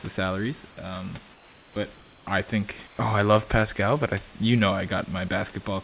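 From 1.34 to 1.76 s, just before "I think oh I", the room background drops out and a flat, featureless hiss about 3 dB quieter fills in. That's comfort noise in place of the background, likely from discontinuous transmission swapping the real room sound for synthetic noise during the pause.

At 1.74 to 1.76 s the next sound starts abruptly, missing its soft beginning. That's an onset clipped by the voice detector, likely because the detector was about 20 ms late to resume sending.

The same comfort noise returns from 1.94 to 2.27 s, about 2 dB down, and again from 2.87 to 2.99 s, between "I think" and "oh I love", where the drop is bigger, about 7 dB. All of it sits in a band that stops at 4 kHz, which fits a G.711 call path.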